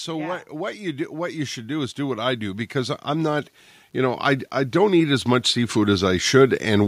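From the very start the speech carries a grainy, gritty edge that tracks the signal itself: it roughens quiet stretches and syllable tails, and the softest bits sputter or drop out rather than fading smoothly. That's low bit depth without dither, likely from the audio being truncated to something like 9 bits with no dither to decorrelate the rounding error. The distortion sits roughly 45 dB under the signal and moves with it rather than behaving like steady hiss.

Right after "yeah what", at 0.5 s, an automatic gain rise kicks in and keeps going until about 6.83 s. The gain control evidently judged the input too quiet and kept nudging its level up, about 14 dB in total over those six-odd seconds. Voice and background swell together, so the room gets louder along with the talker.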